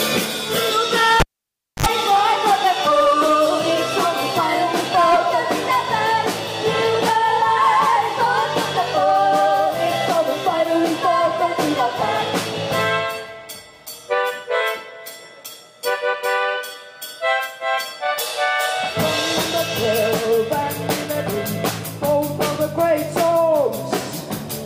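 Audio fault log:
1.20–1.86 s, cable pulled and plugged in: a pop, about 0.61 s of near silence, then a 64 ms burst of 50 Hz mains buzz and a second pop as sound returns. A live lead was pulled, then reinserted, its tip briefly picking up hum before seating.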